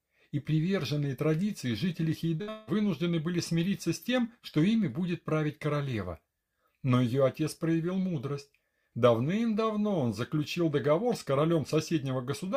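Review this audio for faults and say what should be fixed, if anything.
At 2.35 s there's a short concealed packet loss lasting about 40 ms, through 2.41 s. That slice never reached the decoder in time, so the receiver extended the preceding sound to cover it and then blended back into the real audio, which comes across as a quick smear or wobble.

Right after it, from 2.41 to 2.49 s, comes a burst of packet loss of about 60 ms. The receiver again carried the last sound forward and turned it down as the gap went on, so you hear a held buzz or fading hiss, and roughly 60 ms of the original is simply missing when the audio picks up.

From 2.49 to 2.69 s there's about 180 ms of synthetic continuation that keeps fading but never drops to true silence, and the audio resumes further along with that stretch gone. This is likely a long network dropout, where nothing arrived for the whole span and the concealment ran out of real material to extend.

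Together the three make one continuous damaged stretch of about a third of a second, from 2.35 to 2.69 s. To prevent it, fix the network path so packets arrive reliably, and give the jitter buffer more room or add forward error correction or redundancy so short losses can be recovered rather than guessed.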